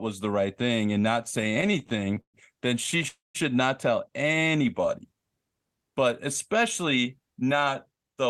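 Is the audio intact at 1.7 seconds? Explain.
No. At 1.7 s the speech is in the middle of repeated stalls (stutter), running from 1.41 to 2.36 s just after "right thing and not". The audio drags and catches, with 17 short hold-ups, the longest 129 ms, covering about a third of that stretch. Packets arrived late, so the jitter buffer kept emptying. Each time, the receiver stretched the last sound, fading it in longer waits, for about 302 ms in all, with nothing actually lost.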